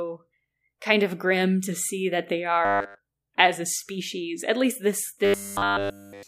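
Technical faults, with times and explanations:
2.65–2.99 s and 5.25 s to the end: robotic sound from repeated short buffers. The speech becomes a rigid, metallic buzz at 100 Hz, entirely repeated material. A 10 ms slice is likely being looped while fresh audio arrives too slowly, and that loop length sets the buzz pitch.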